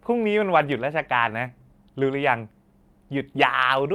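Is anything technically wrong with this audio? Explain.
Yes, there are packet-loss faults. There is a lost packet rebuilt from error correction at 0.53–0.67 s and 1.43–1.45 s. Low-bitrate backup copies replaced the missing audio, so those stretches sound rougher and noisier, with no gap. At 1.47–1.51 s, a short concealed packet loss left 20 ms missing. The decoder extrapolated the preceding sound, causing a brief smear or wobble.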